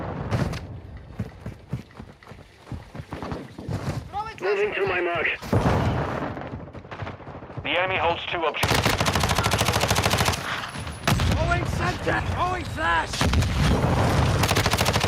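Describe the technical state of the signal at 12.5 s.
At 12.5 s the gain pumping running through the whole clip is present: the gain ducks roughly 10 dB under loud sounds, likely an over-driven input hitting a fast limiter, unlike gating, which silences gaps.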